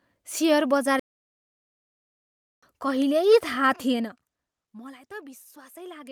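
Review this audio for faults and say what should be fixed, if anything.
A playback stall cuts the speech off at 0.99 s and leaves silence for about 1.63 s until it resumes at 2.63 s. The likely cause is the player running dry of buffered data or its output thread being blocked. On a waveform the gap is a flat line, and a spectrogram shows an empty vertical band across all frequencies with an abrupt edge on each side. Larger playback buffers and keeping the audio thread free of blocking work would prevent it.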